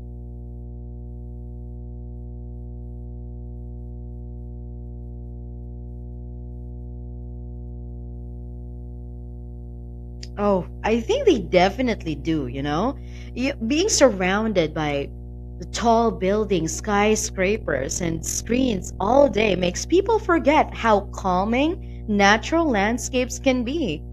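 From the first second to the last, a steady 60 Hz mains hum sits under the speech, roughly 15 dB below it. A ground loop or a nearby transformer has leaked the power line into the signal path. Unlike rumble or wind noise, it doesn't wander or swell. It holds one fixed pitch with some low harmonics, and its 60 Hz fundamental separates it from a 50 Hz supply.

From 17.55 s to 19.70 s, just before "people forget how", overlap-add ripple gives the speech a rough, buzzy tremolo. The sound was processed in windowed frames and rebuilt with an overlap that doesn't add up to a constant gain, so the level dips and recovers once per frame, around 40 times a second, with a depth of about 11 dB. A 40 Hz pulsing could be confused with the hum, but it is a loudness flutter in the speech itself, not a separate tone, and it stops when the passage ends.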